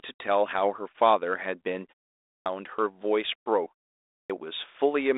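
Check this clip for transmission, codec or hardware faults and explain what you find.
Two clipped starts after a pause, heard over a narrowband G.726 link at 32 kbit/s that passes nothing above 3.8 kHz.

Clipped start after a pause, at 2.30 s and 4.12 s: after roughly half-second silences, the sleeping output device wakes late, swallowing about 160 ms and 180 ms of onset. Muted pauses lose no speech. Here it begins abruptly, already underway.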